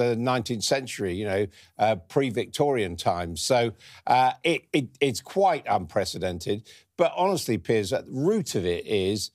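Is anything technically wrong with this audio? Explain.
No, nothing technically wrong turns up anywhere in this speech recording, so there's nothing here to flag.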